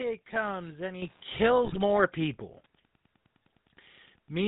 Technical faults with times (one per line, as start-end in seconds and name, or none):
0.00-4.47 GSM full-rate codec
1.65-1.77 GSM bit errors